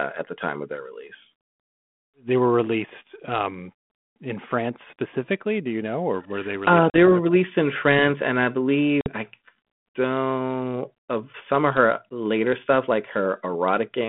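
Packet loss on an ADPCM call breaks this speech clip at 6.90 s and again at 9.01 s, where about 40 ms and then 50 ms of audio, a handful of packets each time, drop to hard-edged silence. Because the receiving decoder's adaptive predictor and step size drift away from the sender's during each gap, the speech resumes with brief distortion before settling, all over the band-limited 32 kbit/s G.726 line.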